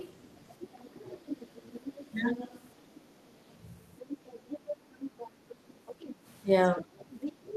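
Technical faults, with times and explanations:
0.00–0.14, 0.63–2.65, 3.99–4.67, 4.93–5.28 and 5.49–6.15 s, other side's voice leaking through: the echo canceller likely failed to strip loudspeaker pickup from the microphone, so a faint second voice, roughly 15 to 20 dB below the main talker, runs underneath in repeated patches.
6.78–6.90 s, speech suppressed in double talk: with both sides talking at once, the canceller likely could not tell the near talker from the echo and attenuated everything, so the main voice briefly dips by about 15 dB for around a tenth of a second.
6.79–7.56 s, other side's voice leaking through: here more residual echo likely escaped cancellation, sitting only about 5 dB under the main talker, so the second voice becomes clearly audible and competes with the speech right to the end.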